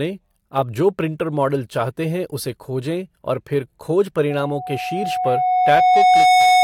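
A loudspeaker feedback squeal enters this speech clip at 4.30 s and runs to the end at 6.64 s. A single tone near 734 Hz swells over roughly two seconds until it stands about 10 dB above the speech. The microphone is picking up the loudspeaker it drives, and at that frequency the loop gain has passed unity, so the tone keeps feeding itself and growing rather than dying away.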